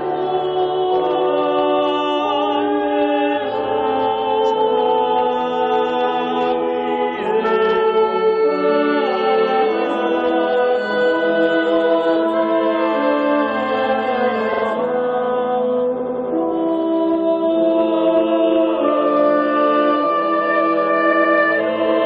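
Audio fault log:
14.52–14.62 s, 15.99–16.27 s and 21.12–21.35 s: repeated frames. A 46 ms block plays twice more, then a 93 ms block three more times, then a 116 ms block twice more, which fits runs of two, four and five compressed frames being decoded again. The result is a rhythmic stutter, with about 0.6 s added in total. Unlike a dropout, no sound is lost, and each repeat is an identical copy rather than a gap or smeared fill.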